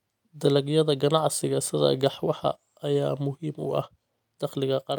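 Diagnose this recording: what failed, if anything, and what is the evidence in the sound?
Nothing failed in this recording, and the sound gives no evidence of a fault at any stage.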